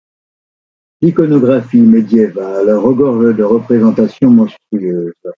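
All the way through the speech there's gain pumping, with the level swinging by something like ten decibels. That points to the input gain likely being set way too high, with a fast limiter or compressor clamping down on each loud syllable, so everything sounds squashed. The call-style microphone processing is audible too, with nothing above 8 kHz.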